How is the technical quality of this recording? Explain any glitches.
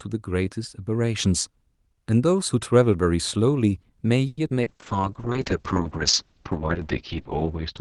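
The speech carries a cluster of call-transport faults between 4.27 s and the end. Before that, the Opus call path sounds clean, with full 12 kHz bandwidth.

At 4.27 to 4.40 s there is a call audio freeze. The last sound is stretched into a fading buzz or hiss for about 100 ms. A likely cause is delayed packets draining the jitter buffer. When the audio resumes, nothing is lost; a gap was simply inserted.

At 4.49 to 4.53 s playback skips ahead. Roughly 70 ms of speech is dropped, probably as the buffer sheds the backlog from the freeze. The two sides are spliced almost directly, so a fragment of sound vanishes abruptly.

At 4.62 to 4.69 s comes a short concealed packet loss. About 40 ms never arrived in time. The decoder extrapolated the preceding sound and blended back. The result is a brief smear or wobble, and a short consonant may disappear.

From 4.64 s to the end there is a call bitrate drop. 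The encoder falls from 64 kbps to 6 kbps and stays at the lowest rate for 2.71 s. Bandwidth halves from 12 kHz to 6 kHz. The speech turns muffled, rough and watery.

At 4.96 to 5.34 s a jitter buffer slow-down occurs. The receiver repeats pitch periods to rebuild its reserve, adding 47 ms. Speech plays at 90% speed with unchanged pitch. Sounds are drawn out.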